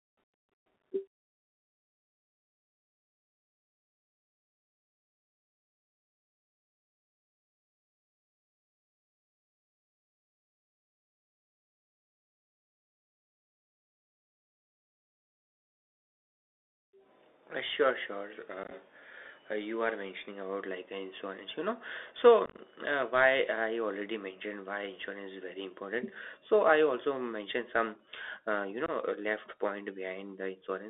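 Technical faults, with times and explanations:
Throughout, Bluetooth CVSD headset codec: the speech sounds narrow and telephone-like, confined to about 300 Hz to 3.6 kHz, with granular hiss underneath, scratchy s sounds and plainly audible distortion, because a one-bit delta coder with an adaptive step cannot track fast, loud changes.
18.63–18.72 s, 22.46–22.58 s and 28.86–28.90 s, unconcealed Bluetooth headset packet loss: abrupt holes chop the speech, as short packets were lost and replaced by silence or an idle pattern. About 38 ms went missing across 75 ms, then 68 ms across 120 ms, then about 23 ms.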